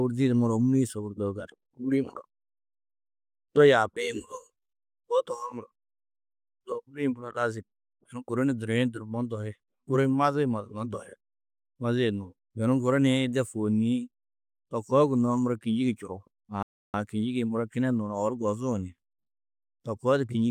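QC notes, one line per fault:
16.63–16.94 s, rebuffering stall: the speech drops to silence for about 0.31 s, then picks up exactly where it stopped, since playback ran dry awaiting data.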